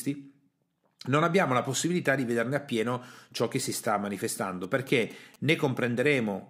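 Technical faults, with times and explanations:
4.64 to 5.51 s, GSM signalling bursts: a galloping dit-dit-dit of short buzzes sits about 25 dB under the speech. A nearby 2G phone is sending brief groups of radio bursts. The audio circuit rectifies them, so each group becomes a buzz repeating at 216.7 Hz.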